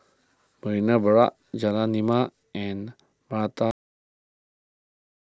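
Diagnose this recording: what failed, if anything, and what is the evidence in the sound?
A cut-off end, at the buffer or storage stage: the speech stops mid-sound at 3.71 s and drops straight to digital silence with no decay. The final buffers were never written. The waveform shows a flat line from 3.71 s onward, and the spectrogram goes abruptly blank.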